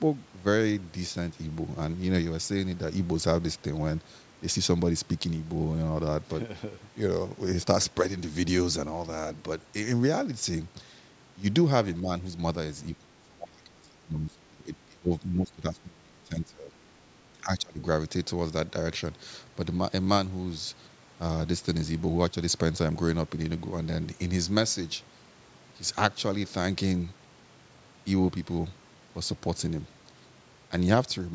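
Speech suppressed in double talk appears at 12.01 to 12.1 s as a brief dip of about 5 dB, then from 12.95 to 16.74 s, where the speech drops by as much as about 25 dB for roughly three seconds in total, and again at 17.43 to 17.8 s with a similar deep cut. The likely cause is an echo canceller that confused this talker with loudspeaker echo while both sides spoke, and attenuated both.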